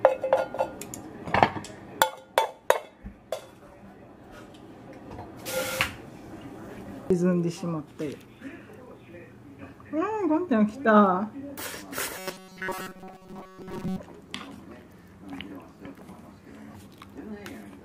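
From 12.17 to 13.98 s the sound turns into a rigid, metallic drone: robotic sound from repeated short buffers. The likely cause is late-arriving audio, with a fragment of about 5.3 ms looped through most of that stretch, imposing a fixed buzz at 188 Hz.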